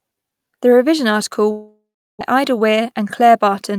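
After "revision article", from 1.51 to 2.33 s, the sound trails into a fading buzz, goes silent, then resumes with 0.62 s lost, likely a long network dropout.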